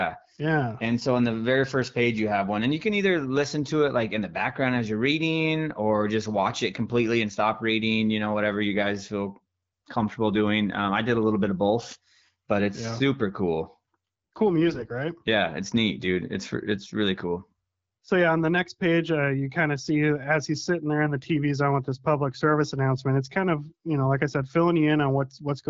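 From 14.67 to 14.94 s the speech turns hoarse and gargly while keeping roughly its pitch and level: AMR bit errors. A few percent of the weakly protected bits in the AMR-WB stream, which at 12.65 kbit/s stays clear outside this stretch, arrived flipped. This misplaced the excitation pulses and skewed the finer pitch, gain and spectral values across a span that points to about a dozen 20 ms frames.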